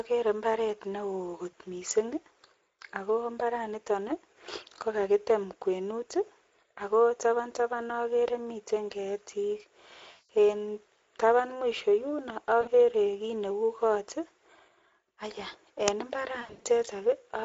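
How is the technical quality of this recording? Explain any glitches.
The recording has audible problems: a low-rate speech codec colours all of it, four dropouts are patched over by the decoder, and one brief digital crack appears near the end.

The Speex codec damage runs through the whole clip. The hoarse, grainy texture points to a rate of about 16.8 kbps, where the CELP coder has too few bits to model the excitation well. The speech sounds rough and noisy, with any upper band reduced to a shaped hiss. This is a steady character, not a momentary glitch. That separates it from the events below, which come and go.

VoIP packet loss concealed by the speech codec occurs at 1.51 s for 20 ms, at 10.11 s for 180 ms just after "taban okere miten ketik", and at 12.61 s for 60 ms after "taban mwisho yuno". From 16.41 to 16.68 s, 200 ms of losses are scattered across 240 ms, with the longest gap 80 ms. 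The decoder keeps repeating its last pitch and filter at falling gain, so the sound smears into a fading buzz instead of cutting to silence. That smearing distinguishes it from a plain dropout. Speech stays weak briefly after each gap while the decoder recovers.

An uninitialised buffer plays at 15.88 s. It is a very short, loud crack, about 2.9 ms long, which fits a 128-sample block. Stale memory was played before real audio filled the buffer. Unlike a concealed loss, it carries nothing from the surrounding speech and does not fade. It is an abrupt foreign spike.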